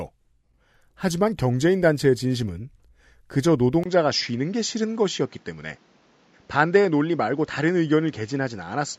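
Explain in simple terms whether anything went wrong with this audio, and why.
Something does go wrong, at 3.84 s. There's a tiny gap, about 20 ms, and from there to the end the speech sounds duller and flatter, with nothing above roughly 7.6 kHz and a faint new background noise, though the loudness stays about the same. That sudden change in character points to an input switched to a poorer device, most likely the system jumping to another microphone or a headset's call mode partway through the recording.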